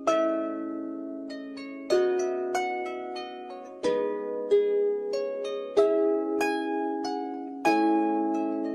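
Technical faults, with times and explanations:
No technical faults are audible.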